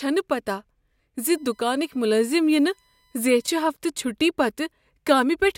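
Current drawn by the USB bus in 1 ms frames leaks through power or ground, putting USB whine into this speech from 1.20 to 3.52 s: a fixed 1 kHz tone with its strongest harmonic at 4 kHz, roughly 40 dB below the voice.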